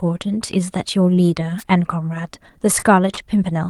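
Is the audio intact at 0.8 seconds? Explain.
Yes, at 0.8 seconds the speech plays through cleanly, with no audible fault at that moment.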